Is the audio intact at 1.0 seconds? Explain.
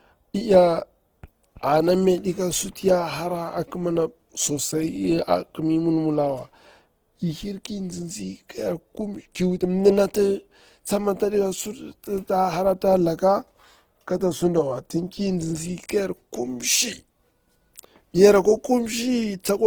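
No. Opus compression, likely near 16 kbps in music mode, runs throughout, filling starved bands with noise or folded content, so the speech sounds plainly rough and grainy.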